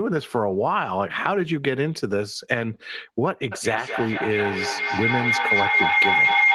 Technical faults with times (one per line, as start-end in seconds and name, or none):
3.52-6.54 feedback howl